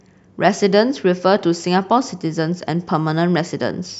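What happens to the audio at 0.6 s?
Nothing goes wrong at 0.6 s; the audio is intact there, with no dropout, click or distortion at that moment.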